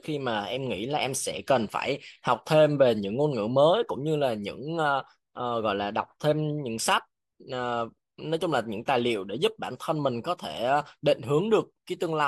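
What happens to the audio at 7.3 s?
Nothing goes wrong at 7.3 s: the speech continues intact there, with no dropout, click, distortion or other fault at that moment.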